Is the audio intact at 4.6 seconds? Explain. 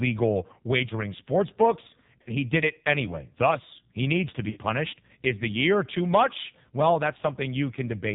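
No. The lost AMR speech frames run from 4.50 to 4.59 s, right after "he needs to," so 4.6 s falls at the moment the decoder resumes. A radio error made about 60 ms of frames fail their checksum, consistent with three 20 ms frames. The decoder repeated the last good pitch and vocal-tract settings at falling gain. The result is a brief drawn-out warble that sags in level, and the sound comes back weak or rough for a moment. On a waveform the envelope decays smoothly through the gap. A spectrogram shows smeared, repeated harmonic stripes fading out.

The whole clip also passes through the AMR narrowband mobile codec at 5.9 kbps, so 4.6 s is affected as well. With 8 kHz sampling, nothing above 4 kHz survives. At this low rate, the vocal-tract model driven by sparse pulses gives a buzzy, synthetic tone. On a spectrogram the energy stops sharply at a flat 4 kHz ceiling. Below that ceiling, the harmonics look coarse and blurred instead of clean.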